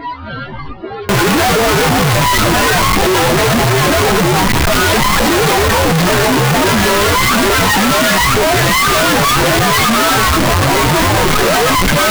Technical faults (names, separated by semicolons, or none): float read as integer